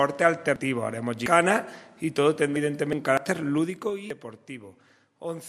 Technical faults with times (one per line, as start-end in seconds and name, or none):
0.56 damaged data in a compressed stream
1.26 dropped buffer (overrun)
2.56 dropped buffer (overrun)
2.93 damaged data in a compressed stream
3.17 dropped buffer (overrun)
3.55-3.92 zipper noise
4.10 dropped buffer (overrun)